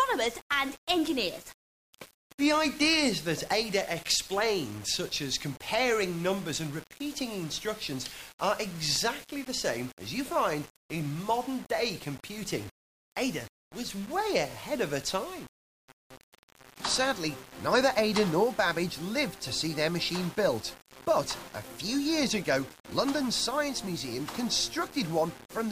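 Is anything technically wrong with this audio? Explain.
Yes. All the way through, there's a grainy, gritty distortion riding on the sound. It gets rougher as the level drops, and the quietest stretches either cut to silence or sputter. That's most likely low bit depth without dither: the audio was rounded to very few levels, which fits about 6 bits, with nothing added to randomize the error. The error tracks the signal, so it sits only around 20 dB down and changes with the sound.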